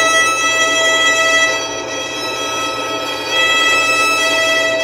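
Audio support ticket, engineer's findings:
No signal-path faults found in the sound recording, with nothing requiring remediation.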